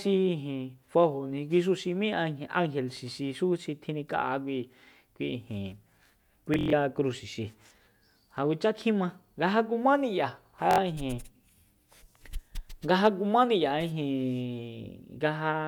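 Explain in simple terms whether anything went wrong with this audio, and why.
Twice the speech breaks into a short buzzing stutter, a Bluetooth stutter. From 6.54 to 6.73 s roughly 140 ms of sound goes missing across about 190 ms, with the longest gap near 93 ms. At 10.71 to 10.78 s about 70 ms goes missing. Audio arrived late or not at all, so the receiver kept replaying its last scrap. Unlike a plain dropout, it buzzes rather than going silent, and the speech then jumps ahead.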